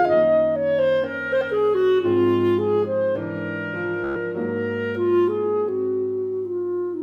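At 4.04 s a short machine-gun stutter breaks in, a tiny slice of sound repeating rapidly until 4.16 s, when playback jumps ahead with about 116 ms of audio missing. This Bluetooth stutter fits several consecutive lost packets, with the receiver replaying its last buffer until fresh data arrived.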